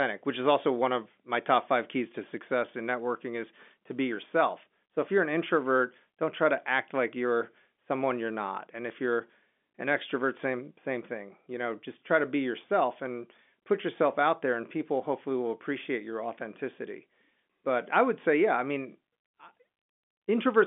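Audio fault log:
No faults are present in this speech clip. The G.711 telephone coding is working as expected, with the sound confined to the phone band of roughly 250 Hz to 3.5 kHz and nothing heard above about 3.7 kHz.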